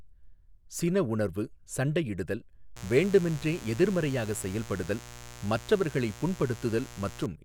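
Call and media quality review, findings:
Mains buzz, 2.76–7.26 s, after "உணர்வு சண்டையிடுதல்": raspy 60 Hz harmonic buzz, roughly 15 dB under speech. Probably dimmer, rectifier or unshielded cable injecting spikes twice per cycle.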